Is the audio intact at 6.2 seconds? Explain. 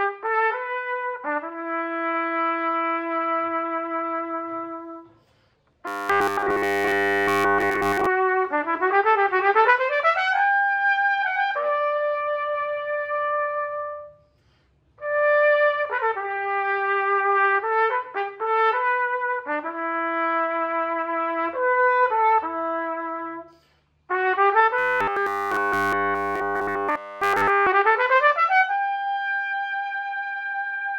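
No. From 5.88 to 8.07 s it turns into a rigid metallic 100 Hz buzz, robotic sound from repeated short buffers, likely a 10 ms chunk looped nonstop.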